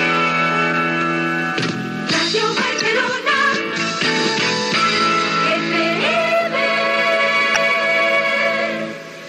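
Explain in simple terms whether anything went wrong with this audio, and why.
The whole clip has a watery, swirly quality, with dull treble and blurry sharp edges. That's likely MP3 compression squeezed hard: the encoder drops the top end and lets quiet details flicker in and out to save space, and you can plainly hear it.

There are also two short blips, at 2.78–2.81 s and 7.54–7.57 s. That's damaged data in a compressed stream: a few bytes went bad, so the player briefly lost its place and glitched before picking the sound back up.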